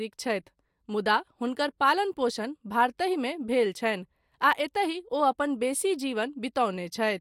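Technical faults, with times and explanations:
No technical faults are audible anywhere in this speech recording.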